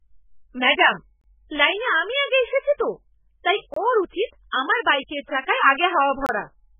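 Right from the start the speech has that watery, swirly quality of heavy MP3 compression, most likely from an encoder starved of bits. Nothing comes through above 3.5 kHz, so the top end is simply gone, and weak detail flickers in and out from frame to frame. S sounds go metallic and attacks blur. How thin it gets points to a very low bitrate, somewhere around 8 kbps.

On top of that there's a gap between chunks, a hole of about 25 ms, repeating every 2.5 s. The first lands at 1.21 s, just before "লাইনে আমি". The next is at 3.74 s, between "এসেছি তো তাই" and "ওঁর উচিত আমার", and the last is at 6.26 s. No sound is actually missing. The audio just stops briefly at each join, as if each block started playing a beat late.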